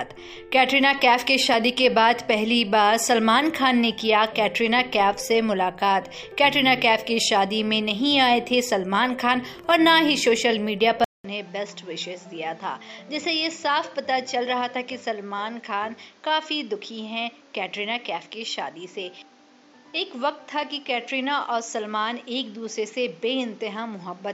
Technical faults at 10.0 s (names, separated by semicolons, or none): none